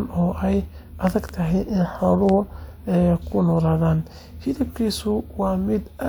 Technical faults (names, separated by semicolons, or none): loud pop